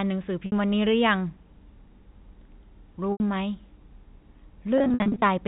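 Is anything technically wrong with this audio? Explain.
Yes. At 0.46 to 0.52 s and 3.12 to 3.20 s the sound briefly freezes into a held, buzzy tone that thins away, and from 4.78 to 5.22 s it stutters repeatedly. This is packet loss with pitch repetition: the receiver bridged 60 ms and 80 ms gaps, then 240 ms of scattered losses (longest 60 ms), by looping the last pitch period and fading it out. The telephone-band G.711 channel carrying it passes cleanly.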